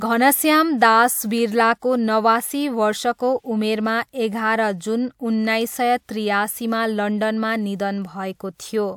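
Nothing in this recording needs flagging, since the speech carries on from beginning to end without a single technical fault turning up.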